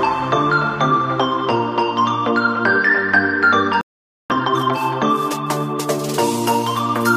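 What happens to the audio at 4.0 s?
A playback stall silences the output from 3.81 to 4.30 s, likely the player running short of data; the waveform flatlines and the spectrogram shows a blank gap.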